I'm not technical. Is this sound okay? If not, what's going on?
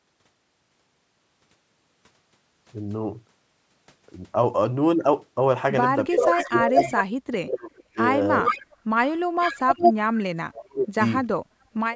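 No. The voice repeatedly goes missing. From 6.07 to 7.98 s, 8.42 to 8.75 s and 10.48 to 11.01 s it fades almost to nothing. This is speech suppressed in double talk, likely from both sides talking at once, so the call's echo removal turned its own talker down along with the echo. It's a gap, not an extra sound.

You also hear an echo leak. A second copy of the voice arrives about 0.4 s late, at 6.31 to 7.03 s, 8.44 to 8.64 s and 9.39 to 10.21 s. It's roughly as loud as the original, louder in the last one, likely from a speakerphone the call didn't fully cancel. This one adds a delayed repeat rather than a drop-out.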